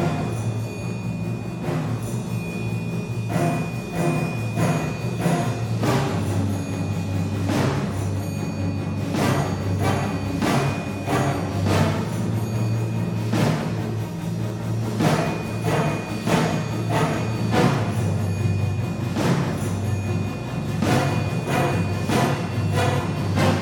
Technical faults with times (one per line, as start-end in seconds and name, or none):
0.26-23.56 clock drift buffer slips